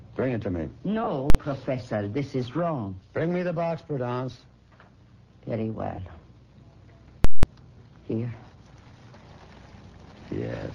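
At 1.04 to 1.07 s and again at 5.96 to 5.98 s you get lost LE Audio frames: the decoder papers over the 30 ms and 20 ms gaps with reused, sign-scrambled spectrum, so the sound smears into noise. Invalid numbers at full scale hit at 1.30 s, a single 46 ms bang that fits a 2048-sample block, and at 7.25 to 7.43 s, where the output sits flat at one extreme value and you hear a loud pop at each end with nothing between.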